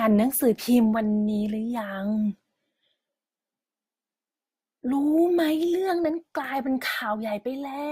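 From start to finish the speech carries stacked compression damage, most likely transcoding between lossy codecs: a Vorbis-style pass near 42 kbit/s re-encoded as Opus at about 48 kbit/s. Opus wastes bits preserving Vorbis's artefacts, then adds its own, so both flavours sit together.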